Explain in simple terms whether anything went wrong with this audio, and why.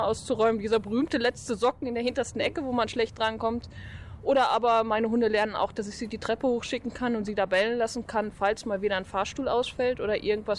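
Nothing went wrong with this audio that a careful listener would notice. At no point does the sound do anything that points to a technical problem, so there is nothing here to explain.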